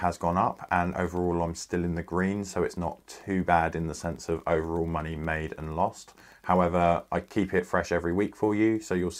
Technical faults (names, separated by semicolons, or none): none